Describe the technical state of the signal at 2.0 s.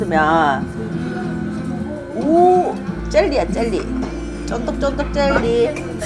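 At 2.0 s the audio is intact, with no technical fault present at that moment.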